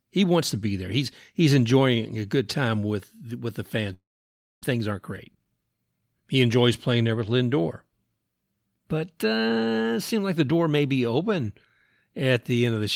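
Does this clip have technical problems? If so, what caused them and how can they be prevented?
Yes. A long network dropout runs from 3.93 to 4.66 s. The last sound smears into a fading buzz, then about 0.6 s of silence follows, and speech resumes with 400 ms lost, likely because packets stopped arriving. A more stable network path or stronger loss protection would prevent it.

Jitter buffer speed-up follows from 4.74 to 6.36 s. With too much delayed audio queued after the gap, the receiver repeatedly cut short pitch-period slices, so speech plays at 116% speed, hurried at unchanged pitch, shedding about a third of a second. Smoother packet delivery would prevent it.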